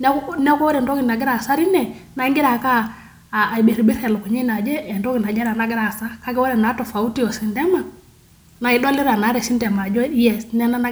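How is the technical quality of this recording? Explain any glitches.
No technical glitches can be heard in this speech recording. There is nothing at any point in the audio that calls for an explanation.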